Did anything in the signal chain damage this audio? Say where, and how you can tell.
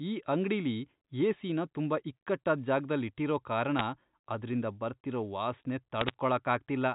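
Yes, bit errors on the digital phone line, at the network/transmission stage of a G.711 mu-law call. There are bit errors at 3.79 s after "ಇಕ್ಕಟ್ಟಾದ್ ಜಾಗ್ದಲ್ ಇಟ್ಟಿರೋ ಕಾರಣ" and denser crackle from 6.01 to 6.14 s after "ಕಾರಣ ಅದ್ರಿಂದ ಬರ್ತಿರೋ ವಾಸ್ನೆ". Each flipped bit corrupts one sample, which shows as single-sample spikes on the waveform and thin full-band vertical lines on the spectrogram, topping out at 4 kHz.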